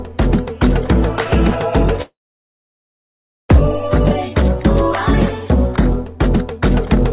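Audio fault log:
2.02–3.51 s, call audio freeze: a brief fading buzz, then 1.36 s of silence, before the sound resumes exactly where it stopped, nothing lost but 1.47 s late; likely delayed packets emptied the jitter buffer. The waveform shows a flat gap, and the spectrogram a blank column below the 4 kHz ceiling of the G.711 call path.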